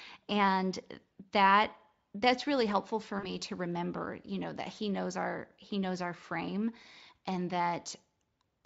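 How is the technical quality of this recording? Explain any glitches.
One glitch is audible in this speech, which is carried over a lightly coded Speex link. From 3.19 to 3.34 s, VoIP packet loss is concealed by the speech codec. About 40 ms went missing, which fits two lost frames. The decoder stretched its last sound into a fading buzzy tone or coloured noise, then recovered slowly.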